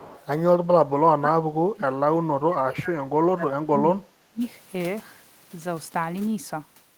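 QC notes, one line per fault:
0.00 to 0.26 s, echo leak. A faint delayed copy of the speech trails it by about 0.3 s, sitting well below the main level. A likely cause is a loudspeaker echo the far end's canceller failed to remove and sent back down the line.
0.61 to 4.43 s, speech suppressed in double talk. The talker's level sinks, at worst by roughly 35 dB. Likely both sides spoke at once, and the echo canceller, unable to separate talker from echo, turned both down.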